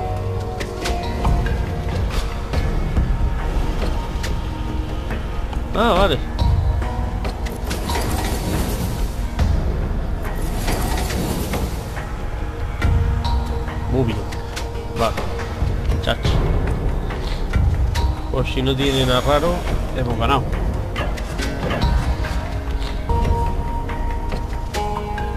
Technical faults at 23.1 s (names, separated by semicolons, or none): damaged data in a compressed stream